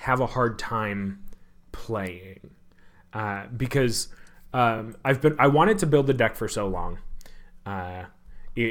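At 4.77 to 4.80 s there are repeated frames. A 23.2 ms block, which fits one compressed frame, plays twice. It gives a brief stutter and adds 23.2 ms.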